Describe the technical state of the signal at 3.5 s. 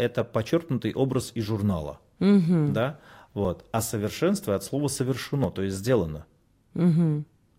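At 3.45 s there is an overlap between stream segments: two segments' time stamps claim the same stretch, and playback trims that stretch even though the speech wasn't doubled. About 18 ms of audio vanishes, so the waveform jumps and a brief click or skip is heard.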